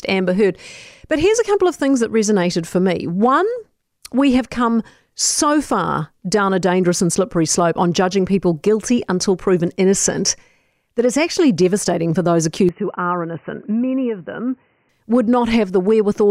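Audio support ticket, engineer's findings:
12.69 to 14.89 s, right after "actually devastating for those": speech turns dull and boxy, nothing above 3 kHz. Level drops roughly 5 dB. New noise floor appears, some 40 dB under the speech. No gap at the switch. Likely input switched to a poorer device.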